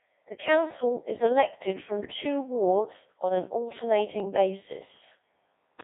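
Speech coded throughout by the Codec 2 vocoder, with heavy damage. The voice is rebuilt at the decoder from pitch, voicing, energy and a spectral envelope rather than from the original waveform, so it comes out robotic and buzzy, and the sound fits a very low rate of around 1.6 kbit/s. On a spectrogram the energy sits within roughly 250 Hz to 3.6 kHz. Voiced stretches show unnaturally regular, evenly spaced harmonic stripes, and the fine detail between them is smeared. The waveform looks synthetic and lacks the irregular shape of natural speech. From 4.2 to 4.25 s there are bit errors on digital voice radio. Flipped bits, at a rate of a few percent, corrupt the parameters of what sounds like a single vocoder frame. The voice gives a brief warbling bleep with a sudden jump in pitch and tone colour. The spectrogram shows a short block whose harmonic spacing and envelope break from their neighbours, and the waveform shows a step in level lasting about 50 ms.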